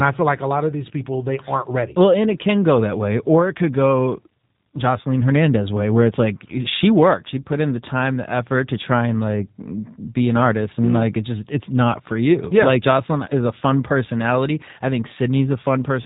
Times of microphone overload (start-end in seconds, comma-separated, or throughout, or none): none